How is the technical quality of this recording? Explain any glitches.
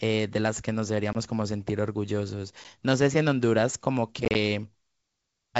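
Three short dropouts from packet loss on an ADPCM call break up this wideband speech, at 1.13 s (20 ms gone, about two packets), 2.64 s (10 ms, one packet) and from 4.25 to 4.36 s (50 ms scattered in bursts, longest 30 ms). Each hole is filled with silence, and because the lost packets never reach the decoder, its adaptive predictor and step size lose track of the sender's. Speech cuts out with hard edges, then resumes slightly distorted before settling.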